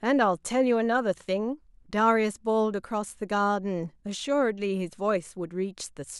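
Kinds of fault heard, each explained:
No technical faults heard.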